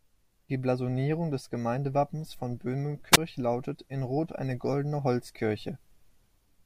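Between 3.12 and 3.17 s, the wireless microphone's radio signal fades far enough that the receiver's squelch shuts the output, causing a wireless microphone squelch dropout. The speech gives way to a brief rise of hiss, then a near-silent hole of about 16 ms before it returns.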